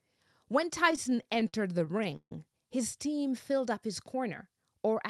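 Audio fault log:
0.85–2.32 s, repeated stalls (stutter): the speech hitches and drags in a quick run of eighteen brief holds, the longest 147 ms, where the last sound is stretched, and faded in the longer ones, before the talker picks up again. Packets reached the receiver late or too slowly, so the jitter buffer kept running dry and the receiver filled each wait by extending what it had, about 357 ms in all, roughly a quarter of that span. Nothing is lost, but the timing lurches.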